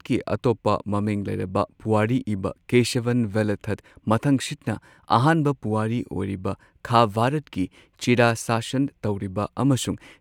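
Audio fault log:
No technical faults can be heard anywhere in the recording, and the signal stays steady and intact throughout.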